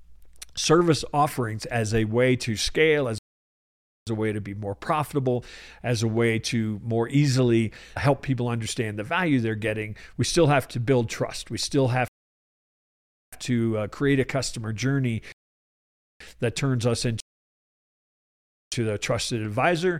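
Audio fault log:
3.18–18.72 s, rebuffering stall, four times: silence at 3.18 s for 0.89 s, at 12.08 s for 1.25 s (before "to uh create a"), at 15.32 s for 0.88 s (after "create a customer journey"), and at 17.20 s for 1.52 s (after "journey that turns us"). Playback ran out of downloaded audio and waited, then resumed exactly where it stopped.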